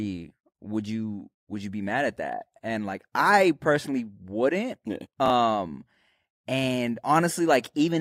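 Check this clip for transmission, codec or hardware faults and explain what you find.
One transmission fault is audible in this speech clip.

Chunks out of order, from 5.26 to 5.30 s: two 20 ms pieces of audio swap places, with the earlier one arriving a single chunk late and playing after its successor. Nothing is missing, but the reordering creates three abrupt joins where the waveform doesn't line up, so this short span of speech sounds briefly scrambled.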